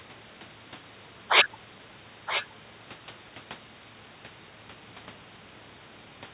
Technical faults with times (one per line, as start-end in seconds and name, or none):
2.26-2.45 echo leak